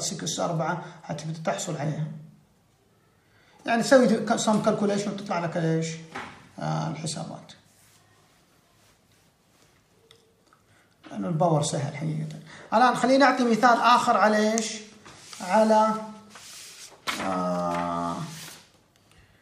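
No technical faults can be heard anywhere in the recording.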